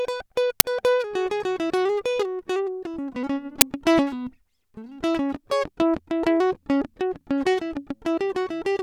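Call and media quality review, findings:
Uninitialised buffer at 0.60 s and 3.61 s in the music. Two brief, loud cracks, about 10 ms each. Probable component: playback buffer. Block played before audio was written to it, so stale memory became samples.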